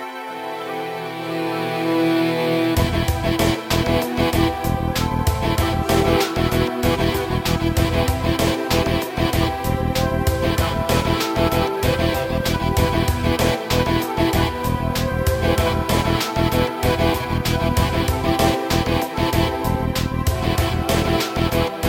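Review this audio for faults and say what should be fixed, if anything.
Crude rate conversion runs through the whole clip. The rate was raised by nearest-sample repetition with no interpolation filter, and the pattern fits a 32 kHz source converted to 44.1 kHz. Duplicated samples fall at an irregular but repeating spacing, producing a gritty, inharmonic fizz roughly 20 dB below the signal that rises with loud and bright passages. Unlike clipping distortion, the added tones are not harmonics of the sound and appear even at moderate levels. To prevent it, resample with a proper band-limited (polyphase or windowed-sinc) converter.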